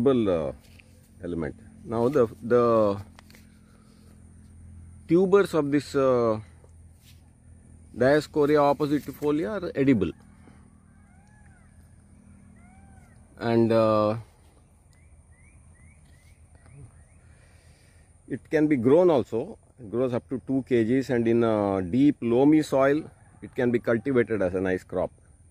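Nothing in the audio stands out as a technical fault, so there's nothing here to flag.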